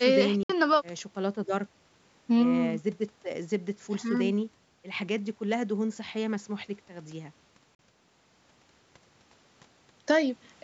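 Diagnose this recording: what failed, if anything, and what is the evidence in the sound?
Playback stage, likely a Bluetooth dropout: abrupt silences at 0.43–0.50 s and 7.75–7.79 s appear as flat waveform gaps and blank spectrogram columns. The sound then resumes mid-stream.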